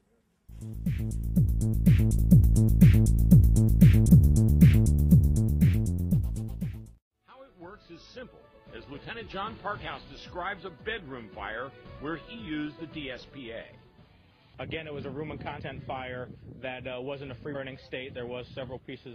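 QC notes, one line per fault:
4.08 s, compressed frames skipped: the sound jumps ahead by about a fifth of a second. Whole compressed frames, on the order of fifteen, were never decoded.
17.54 s, compressed frames skipped: a shorter jump, with about a tenth of a second missing, which points to a handful of lost or rejected frames.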